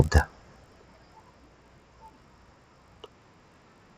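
The resampler restarts on every block: each 20 ms chunk, in what points to a 16 kHz to 48 kHz conversion, is converted in isolation, leaving a small error at every edge. Throughout the speech this adds a 50 Hz buzz, present only with signal.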